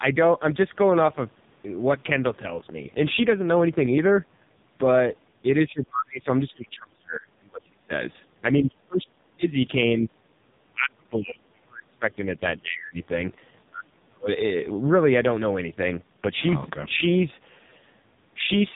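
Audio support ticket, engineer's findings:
Speech path through AMR narrowband mobile codec, throughout. Low-rate mode, sound fits roughly 5 kbps. Sparse pulse excitation per 20 ms frame, so heavy buzzy, synthetic timbre. Nothing above 3.8 kHz: dull, muffled, sibilants lost.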